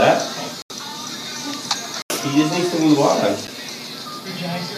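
A short piece of audio with three blocks of digital silence: the sound cuts out from 0.62 to 0.70 s and from 2.02 to 2.10 s, each an 80 ms hole, and again at 3.47 s for about 9 ms. There is no fade at any edge. The longer two read as brief dropouts, the last as a single tick. This points to the output buffer not being filled in time.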